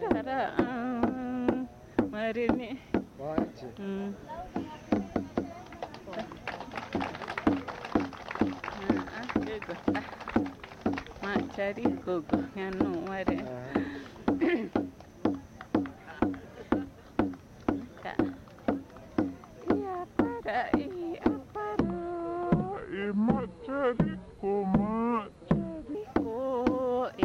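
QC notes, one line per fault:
21.80–25.95 s: section at the wrong speed, running at 0.68x so the sound drags and drops roughly seven semitones, likely from resampling against a mismatched clock.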